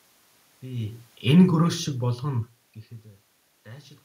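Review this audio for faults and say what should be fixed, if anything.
Automatic gain falling from 1.23 to 2.66 s: the gain control judged the input too loud or its background noise too strong and eased it down about 7 dB. Unlike a talker moving away, the room noise sinks along with the speech. Lowering the input level before the gain control, or giving it more headroom, would keep it from pulling the level down.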